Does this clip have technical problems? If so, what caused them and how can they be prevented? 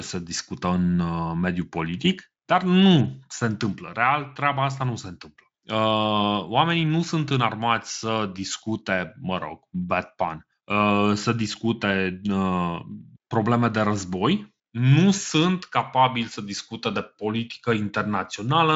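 No technical faults are audible.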